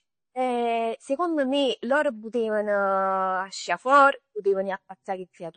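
From start to finish the speech has that watery, swirly coating you get from heavy lossy coding, most likely MP3 compression squeezed to a low bitrate, which fits something around 32 kbps. Nothing comes through above 9 kHz because the encoder has chopped off the treble to save bits, so s sounds lose their edge and turn a bit metallic. Weak frequency lines keep dropping in and out between frames, which gives the swirl, and consonant attacks come out smeared.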